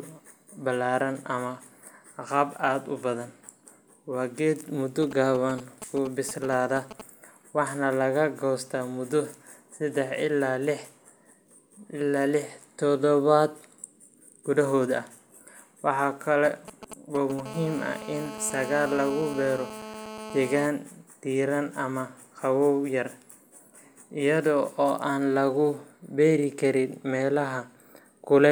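From 5.03 to 7.01 s, GSM signalling bursts break into the speech. A 2G phone close by is sending short groups of radio pulses. The audio circuit rectifies them into sound. The result is a galloping dit-dit-dit of brief 217 Hz buzzes. It sits roughly 10 dB below the speech. The same pattern returns from 16.45 to 17.41 s, a little quieter, roughly 15 dB down.

At 17.46 s the bursts give way to a steady GSM phone buzz, lasting until 20.67 s. The phone has now gone into a call. It transmits a pulse 217 times a second without pause. The circuit demodulates this into a hard, raspy 217 Hz buzz, rich in harmonics. It has no relation to the speech. It runs about 12 dB below the speech level.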